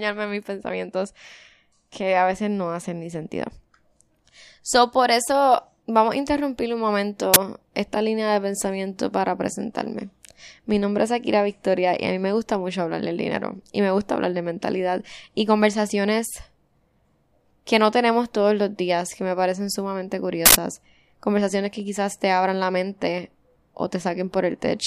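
A speech clip with two uninitialised buffer faults. At 7.34 s, after "vamos a interrumpir un", a 23 ms loud crack plays. A 93 ms burst follows at 20.46 s, after "que me parecen sumamente". Each comes from stale memory played as audio, fitting 1024-sample and 4096-sample buffers.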